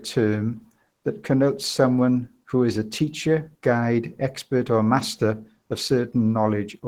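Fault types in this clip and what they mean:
Opus compression: the speech sounds hoarse, muffled and grainy throughout, the likely sign of Opus at a low rate, around 16 kbps, in its hybrid speech mode. Unlike MP3, there is less swirly, watery warble from spectral holes, more roughness and added noise.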